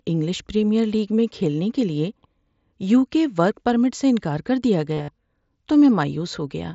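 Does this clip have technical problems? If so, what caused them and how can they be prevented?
Yes. From 4.94 to 5.08 s there is concealed Bluetooth headset packet loss. About 112 ms of audio went missing, scattered over 150 ms, with the longest gap about 52 ms. The receiver patched each hole by repeating the best-matching recent waveform, producing a buzzy, level-held tone and a slight warble as real audio resumes. A waveform shows identical copied cycles at constant amplitude, and a spectrogram shows rigid, evenly spaced harmonic stripes. Keeping the phone close to the headset, in clear line of sight and away from crowded 2.4 GHz Wi-Fi, prevents it.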